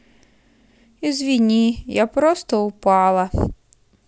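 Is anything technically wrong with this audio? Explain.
No, nothing is technically wrong with this audio.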